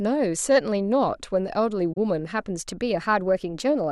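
At 1.93 s the speech drops into a short gap that lasts until 1.97 s, about 43 ms, which fits two lost AAC frames. This is AAC frame loss with muting: the decoder had nothing for those frames and set their spectrum to zero, so the overlapping windows fade the sound out and back in. Unlike a hard dropout or a digital glitch, the hole has soft edges.

From 2.63 s to the end of the clip, the speech suddenly runs about 6.3% faster and sits roughly 106 cents higher, just over a semitone. Because speed and pitch rise together in a single jump rather than sliding, the likely cause is a drift correction step, where clock-matching software changed the playback rate at once to drain or refill its buffer. A pitch shifter alone would leave timing unchanged, and a slowly drifting clock would glide rather than step.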